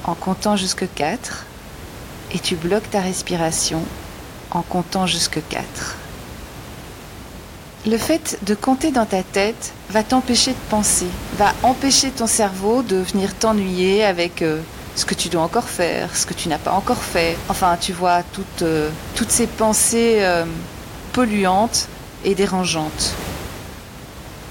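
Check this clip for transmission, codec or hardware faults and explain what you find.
No transmission, codec or hardware faults can be heard in the speech, and the only thing beneath it is background noise from the room itself, sitting about 15 dB below the voice, which belongs to the recording rather than to the system.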